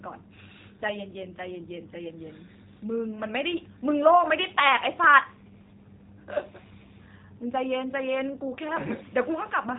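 Throughout, the speech sounds slightly rough and synthetic, with nothing above about 3.8 kHz. That is G.729 codec damage, plainly audible, consistent with an 8 kbit/s stream: the voice is rebuilt from a vocal tract filter, pitch predictor and sparse pulses rather than transmitted directly.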